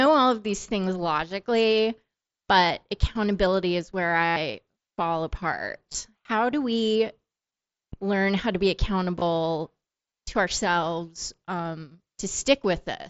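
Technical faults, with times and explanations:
4.26–4.36 s, concealed Bluetooth headset packet loss: just after "but accountability is where", about 0.1 s of the headset link dropped out and the phone filled it by repeating the best-matching recent stretch of waveform, giving a buzzy, full-level held tone with a slight warble as real sound resumes. This fits roughly fourteen lost 7.5 ms frames.
5.92–5.95 s and 9.19–9.22 s (after "learn how to be"), concealed Bluetooth headset packet loss: each is a short gap of about 23 ms.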